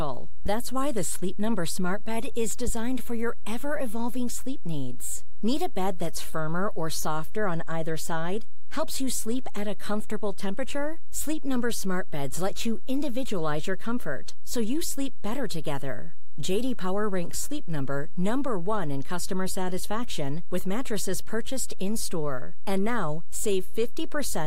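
A speech recording carries a DC offset from start to finish. The whole waveform sits displaced from zero by a constant of about -18 dBFS. You cannot hear it as a tone. It wastes headroom and appears as steady energy at the very bottom of the spectrum.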